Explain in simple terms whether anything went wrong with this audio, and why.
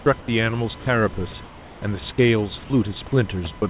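USB whine runs through the whole recording as a faint, steady tone at 1 kHz. The USB connection draws power in bursts a thousand times a second, and that rhythm leaks into the audio through the power or ground wiring. It comes out as a fixed pitch sitting under everything, at 1 kHz itself, rather than as ordinary hiss.

Comfort noise in place of the background shows up twice, briefly at 0.20 to 0.28 s and for longer at 1.44 to 1.82 s. During these pauses the natural room sound is swapped for a smooth, featureless hiss that is a little quieter, most noticeably in the second gap. The likely cause is that the sending end stopped transmitting when it judged nobody was talking, and the receiving end filled the silence with made-up noise.

Sound dropped by the voice detector happens at 0.80 to 0.86 s and again at 3.58 to 3.62 s. In both spots real sound briefly vanishes and steady noise takes its place, about 60 ms the first time and a shorter clip near the end. 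The likely reason is that the detector mistook quiet sound for background and cut it off until it switched back on.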